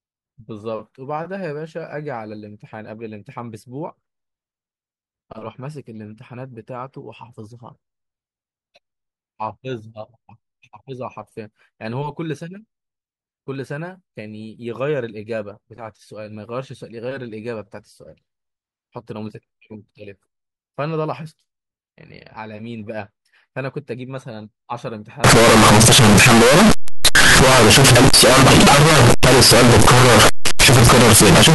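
From 25.24 s to the end, the speech turns into very loud harsh distortion, likely from signed and unsigned mixed up in 16-bit samples; the waveform jumps sharply at every zero crossing and the spectrogram floods broadband.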